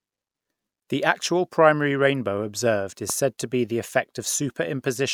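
At 3.10 to 3.12 s, after "primary rainbow observed is", a single sharp pop jumps roughly 10 dB above the speech: a loud pop, likely from a sudden voltage spike.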